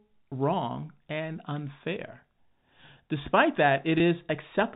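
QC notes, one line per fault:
3.98–4.00 s, packet loss with pitch repetition: a gap of about 20 ms, which fits one lost packet, was bridged by repeating the last pitch period, so the sound briefly holds with a slightly buzzy, frozen quality instead of dropping out. On a waveform the span shows identical periodic cycles; on a spectrogram, flat unchanging harmonic stripes, all under the 4 kHz ceiling of the G.711 telephone coding, before normal movement resumes.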